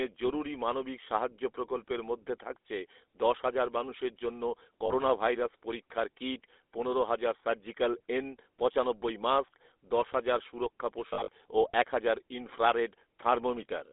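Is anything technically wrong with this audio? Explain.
Yes, there are two problems. Throughout, the speech has the GSM full-rate codec on it, and the damage is plain. The codec builds the voice from a vocal-tract model driven by a sparse, evenly spaced pulse train, so you get that buzzy, gravelly grain, and the band is squeezed to roughly 300 Hz to 3.6 kHz, so it sounds thin and phone-like. It all fits GSM full rate at 13 kbps.

There are also lost GSM frames in two spots. From 4.86 to 4.92 s, right after "দশ হাজার মানুষের জন্য", about 40 ms drops out, which sounds like two 20 ms frames. The decoder just repeats the last good frame's settings, so you hear a brief rough, metallic ring instead of speech. Between 11.08 and 11.29 s, after "মাস্ক দশ হাজার সুরক্ষা" and before "ও এক হাজার ইনফ্রারেড", 140 ms is lost in scattered gaps over 200 ms, the longest around 40 ms. That makes a choppy patch of repeated metallic ringing.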